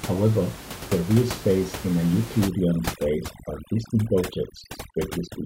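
Overdone noise removal starts at 2.48 s, right after "and a", and runs to 5.45 s. Bands near the estimated room noise, about 12 dB under the speech, are cut hard, so the background drops and breaks up into twinkling specks.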